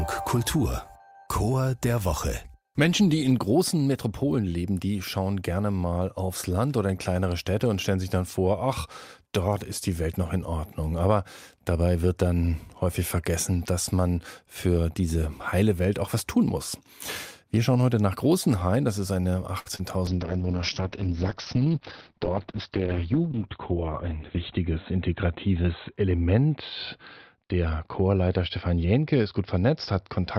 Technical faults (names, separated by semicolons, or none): short stall from a late packet; short concealed packet loss; call bitrate drop; jitter buffer speed-up